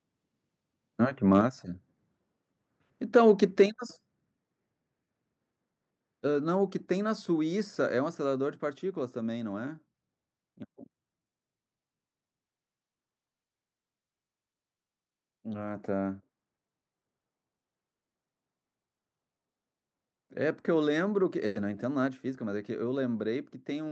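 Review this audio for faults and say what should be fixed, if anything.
Microphone overload at 1.32–1.39 s, 3.16–3.31 s and 3.60–3.62 s adds a harsh crackle to peaks, likely from input gain driving the converter about 1–2 dB past full scale. On the waveform, the tops look flattened; on a spectrogram, they show vertical smears of broadband energy. Lowering the microphone input level so peaks stay below full scale would prevent it.

Microphone volume stepped down at 1.41 s and 3.66 s, with the whole level dropping abruptly by about 4 dB and about 6 dB. This appears as a sudden step in the waveform envelope and uniformly dimmer spectrogram bands. Disabling automatic input gain adjustment in the call software, the likely source, would stop these sudden drops.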